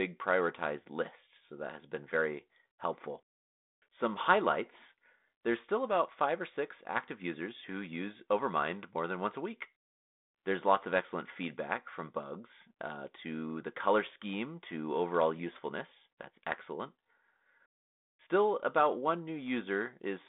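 Nothing's technically wrong with this bit of speech; it just has the narrow, phone-like sound you'd expect from a line carried over 32 kbit/s G.726 ADPCM, with the band running from roughly 200 Hz to 3.7 kHz and nothing above 3.9 kHz.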